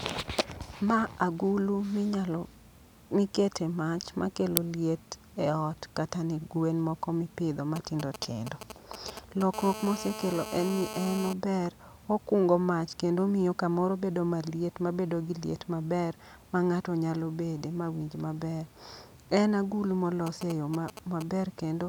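Uninitialised buffer at 4.57 s: for about 1.33 ms a block of playback memory was sent out before any audio had been written into it, so stale data was played as if it were samples. The result is a very brief, harsh crack of digital noise that stands well clear of the speech. Its length fits a 64-sample block being played unfilled before the next block of real audio took over.

GSM signalling bursts from 7.76 s to 9.43 s, and again from 20.27 s to 21.23 s: a 2G handset close to the recording chain was exchanging short bursts of radio traffic with the network rather than carrying a call. Something in the audio circuitry rectified those pulses into the signal. The result is a galloping dit-dit-dit of ticks and clipped buzz fragments at a repetition rate of about 217 Hz, sitting roughly 10 dB below the speech.

GSM phone buzz from 9.54 s to 11.33 s: right after the first signalling episode the phone entered a call and transmitted continuously in bursts about 217 times a second. 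The rectified pulse train comes through as a steady, coarse, rasping buzz rich in harmonics, at about 10 dB below the speech level. It bears no relation to what is being said.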